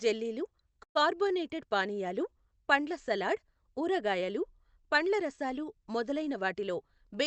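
At 0.83 s the speech stops for about 0.14 s. A brief trailing tone of the preceding sound fades quickly, and roughly 100 ms of near-silence follows before the speech resumes where it left off, with nothing lost. This is a call audio freeze, likely caused by delayed packets draining the jitter buffer. On a waveform it appears as a short decaying tail and then a flat gap. A spectrogram shows a thin smear of the last spectrum fading into an empty column.

From 6.40 s to 7.15 s, right after "రసాలు మొదలైన", the speech runs about 7% fast at unchanged pitch and sounds slightly hurried. This is jitter buffer speed-up. The buffer holds more than its target delay, so the receiver cuts pitch-period-length slices, around 50 ms in total, to catch up. The spectrogram shows the syllables compressed in time while the harmonic spacing stays the same. Throughout the clip, energy stops at 8 kHz, consistent with an Opus call path.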